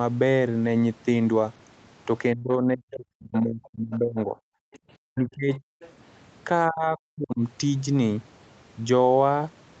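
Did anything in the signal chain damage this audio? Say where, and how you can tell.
Yes. The damage is in the call processing stage, in the echo canceller. Between 2.34 and 4.36 s, 5.14 and 5.74 s, and 6.68 and 7.4 s the speech dips by as much as roughly 40 dB. This is likely speech suppressed in double talk, with both sides talking at once.

The other side's voice is leaking through at 3.94 to 3.98 s, 4.73 to 4.79 s and 5.81 to 5.91 s. These are brief scraps roughly 25 to 30 dB below the speech. The likely cause is loudspeaker echo that the canceller failed to remove from the microphone.

From 4.64 to 4.83 s the room sound drops by about 40 dB, for around 150 ms in total, then returns. That is background gated by the echo canceller. It pulled the microphone down hard while the loudspeaker played, then released it.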